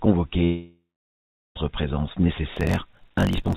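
At 0.44 s the sound breaks off, and the gap lasts until 1.58 s. It is likely a long network dropout: a bit over a second of audio (about 1.12 s) never arrived. The receiver filled the hole by continuing the last sound as a fading buzz or hiss, which gives way to silence for roughly three quarters of a second. On a waveform this is a decaying smear into a flat line. The spectrogram shows a blurred tail dissolving into an empty band before the sound resumes with the lost part simply absent.

From 2.54 s to the end there is a block size mismatch (truncated). Each block is cut short when the next stage reads fewer samples than were written, and the discarded tails produce a steady buzz at 46.9 Hz, which fits a 1024-sample read size. The audio also runs 1.12 times faster at about normal pitch. A spectrogram shows evenly spaced vertical seams about 21 ms apart, and the waveform shows small jumps at each seam. 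Above 4 kHz the spectrogram is empty throughout, as expected from the G.711 A-law call path.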